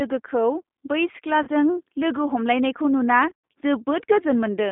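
Throughout the speech, the G.729 codec is plainly audible. Its 8 kbit/s coding rebuilds each 10 ms frame from a vocal-tract filter, a pitch predictor and a few pulses, so the speech sounds rough and slightly synthetic. On a spectrogram, energy sits between about 200 Hz and 3.6 kHz with nothing above, and the harmonics look smeared and grainy instead of cleanly striated.

At 1.43 to 1.49 s, just before "लोगो हमलायनायखौ नुना", VoIP packet loss concealed by the speech codec bridges about 40 ms of missing audio, which fits two lost packets. The decoder repeats its last pitch and filter with falling gain, giving a brief buzzy, stretched tone. It shows as flat, steady harmonic bands and a tapering waveform envelope.

At 3.30 to 3.53 s, after "लोगो हमलायनायखौ नुना", the same packet loss concealment returns more heavily. About 180 ms is lost across a 240 ms stretch, with the longest gap 100 ms. 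The sound turns into a fading buzz and coloured noise. The spectrogram shows smeared, frozen bands that thin out, and the waveform shows weak, uneven amplitude that recovers only gradually.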